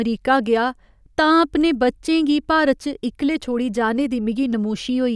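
No technical faults can be heard anywhere in this speech recording.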